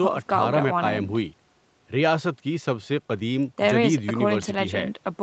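Nothing here counts as a fault: the speech has simply been through ordinary call processing and a call codec, so it stops at about 8 kHz, as it should for a call at this setting.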